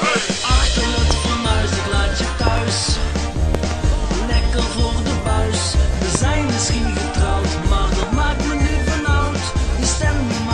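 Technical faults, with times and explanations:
1.11–1.13 s, 2.47–2.60 s, 3.55–3.73 s, 6.15–6.17 s and 8.03–8.05 s, loud pop: seven sharp pops in five bursts rise roughly 15 dB above the sound. The second and third are doubled, two pops in quick succession, and the rest are single. Each is a brief electrical pulse added on top, likely from a plug, switch, static or driver glitch. The sound continues unbroken underneath, which distinguishes these from dropouts or edit clicks that interrupt it.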